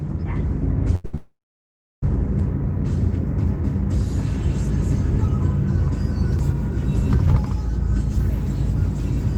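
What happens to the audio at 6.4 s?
At 6.39 s the sound makes a tiny skip: a few milliseconds vanish and the audio on either side is butted together with no gap. This is likely audio missing between chunks, lost as the recorder closed one 4-second chunk and opened the next.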